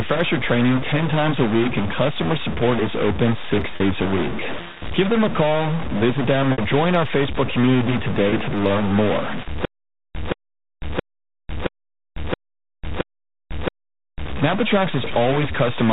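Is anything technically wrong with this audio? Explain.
Yes, three kinds of fault can be heard in this speech.

Stuck bit, throughout: the whole recording carries a distortion that rides on the speech, and the pauses are filled with a gritty noise floor instead of quiet. This is likely a stuck bit, one data line held permanently at 0 or 1. Roughly half the sample values are then pushed off by that bit's weight in a pattern that follows the waveform. Near zero the error flips with the sign of the signal, which is why the gaps turn noisy.

Packet loss with pitch repetition, at 3.76 s, 6.52 s and 8.30 s: each time the sound briefly locks onto a held, slightly buzzy tone before resuming. The first comes right after "support is open six" and lasts about 40 ms before "a week" resumes. The second runs about 60 ms and the third about 20 ms, just ahead of "to learn more". Audio went missing, and the receiver filled each hole by looping the last pitch period. 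The 20 ms steps fit lost 20 ms packets.

Stutter with silent gaps, 9.65 to 14.26 s: just after "to learn more", a short burst of about 174 ms plays, drops to dead digital silence for about 497 ms, and then the same burst returns. It repeats six times at a steady 672 ms interval. This is likely a stalled player or stream that replays its last buffered fragment on each retry and then runs dry. Whatever should have played during those seconds is gone.

The 4 kHz ceiling comes from the G.711 telephone coding, which itself shows no damage.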